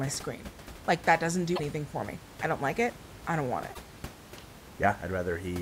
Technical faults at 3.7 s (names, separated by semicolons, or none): damaged data in a compressed stream